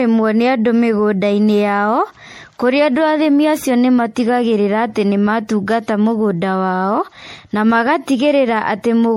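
Throughout the speech, the sound is swirly, smeared and hollow, with blurred attacks and nothing above 16.5 kHz. This is likely generation loss from MP3 re-encoding around ten times, fitting 64 kbit/s. Each pass re-quantises on a shifted frame grid, stacking noise and spectral holes.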